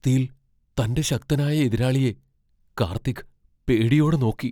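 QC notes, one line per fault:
No technical faults are audible anywhere in the speech signal.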